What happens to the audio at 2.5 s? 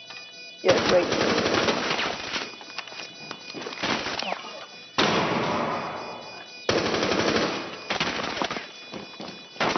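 Nothing goes wrong at 2.5 s; the audio plays through that moment intact, with no dropout, click or other fault.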